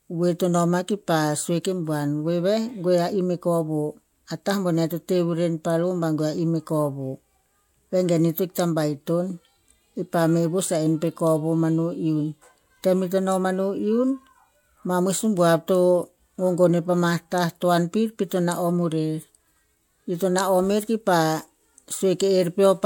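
Listening closely to this speech recording, nothing technically amiss stood out at any point.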